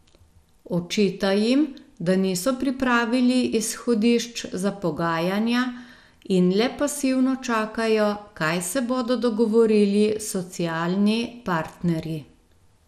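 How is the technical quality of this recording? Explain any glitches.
The recording has one fault that runs through the whole speech clip: plainly audible MP2 compression damage.

Throughout, nothing sounds above 14.4 kHz, and a gurgling, granular roughness sits on the speech. This is likely MPEG Layer II coding starved of bits, consistent with about 80 kbps, switching off upper sub-bands and coarsely quantising the rest. The flickering band grain distinguishes it from a clean low-pass filter.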